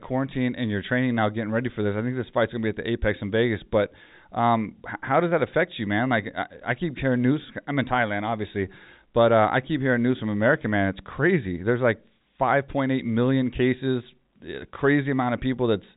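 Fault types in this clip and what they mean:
Nothing in this speech stands out as a technical fault. The sound comes through G.711 telephone coding, so it has the narrow telephone band with nothing above 3.8 kHz.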